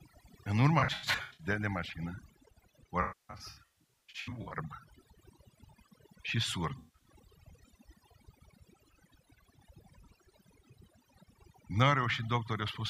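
Throughout, overdone noise removal has been applied too strongly. Bands near the noise estimate are pushed down or switched off, so the background drops and breaks up into twinkling specks. A spectrogram shows isolated dots in blank gaps and ragged, eaten-away harmonics.

AAC frame loss with concealment occurs three times. From 0.79 to 1.47 s, just before "de mașină", about 341 ms is lost across 597 ms. From 3.01 to 4.56 s, about 939 ms is lost across 1.49 s, with the longest run near 300 ms. From 6.79 to 7.09 s, 192 ms is lost. The decoder repeats earlier spectra, so these passages sound smeared and phasey and dip during longer runs. A spectrogram shows frozen, blurred smears, and the waveform shows level sags.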